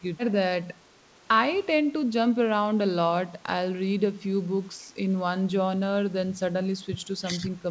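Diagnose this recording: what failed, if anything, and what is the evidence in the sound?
Speech dips by about 10 dB at 2.33–2.4 s and 3.48–3.53 s, likely speech suppressed in double talk: the call-processing echo canceller mistook overlapping talk for echo.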